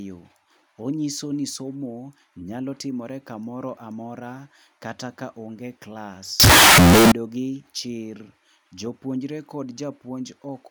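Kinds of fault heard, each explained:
Signed and unsigned mixed up: From 6.40 to 7.12 s the speech turns into loud, harsh distortion, quiet parts as loud as the rest, likely from 16-bit samples read with the wrong sign convention; the waveform jumps rail to rail at each zero crossing, and the spectrogram floods with broadband energy.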